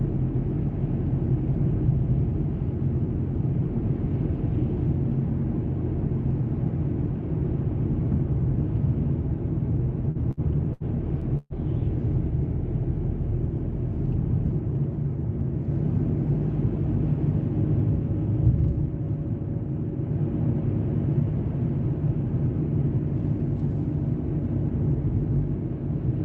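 Audio carried over a call path stutters with repeated stalls from 10.11 to 11.53 s. Five short holds, the longest 126 ms, drag the sound as the jitter buffer repeatedly runs dry. Nothing is lost. The Opus call coding limits the band to about 8 kHz.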